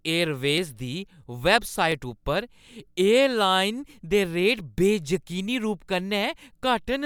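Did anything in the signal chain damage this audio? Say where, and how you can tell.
Yes. Dropped samples at 1.92 s produce a single sharp click in the speech, seen as a thin vertical line running through the whole spectrum. A fraction of a millisecond of audio is missing, far too little to hear as a gap, but the waveform leaps straight from one value to a later one, and that discontinuity is the click. The cause is likely a driver or buffer stage skipping a handful of samples during transfer.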